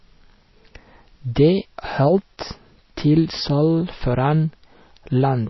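Throughout, the speech stops near 5.8 kHz and sounds watery and swirly, likely from MP3 compression. Unlike a simple low-pass filter, weak detail flickers frame to frame.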